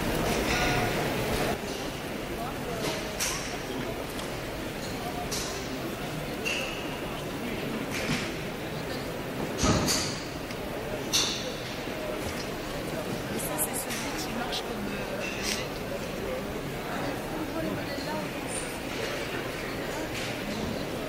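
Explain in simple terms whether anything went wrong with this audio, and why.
At 1.54 s the sound abruptly drops to a noticeably quieter level and stays there to the end. The likely cause is one channel drops out: one side of the stereo signal vanished, and unlike a gradual fade, the drop is instant.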